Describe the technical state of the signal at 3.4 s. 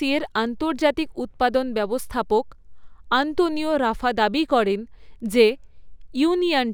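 At 3.4 s, as throughout, imaging from linear upsampling, consistent with 24 kHz raised to 44.1 kHz, dulls the top end. A spectrogram shows a faint mirrored band from 12 to 24 kHz, roughly 35 dB down, heard as metallic shimmer on sibilants.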